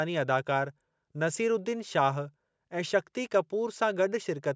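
No technical faults can be heard in the speech, which has simply passed through a call's microphone processing with its low bass trimmed.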